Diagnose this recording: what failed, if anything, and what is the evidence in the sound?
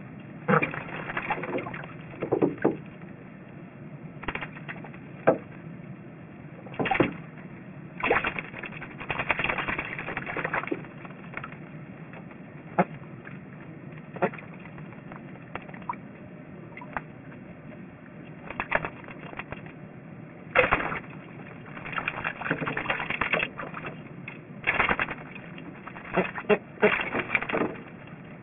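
Aliasing runs through the entire recording and points to the sample-format conversion stage, where the audio was cut down to a rate that fits 6 kHz from 48 kHz without an anti-aliasing filter. Content above the 3 kHz fold point has been mirrored back below it as unrelated tones, so high-frequency detail comes out gritty and metallic. The spectrum is packed right up to the band edge, and the folded energy sits nearly as loud as the sound itself.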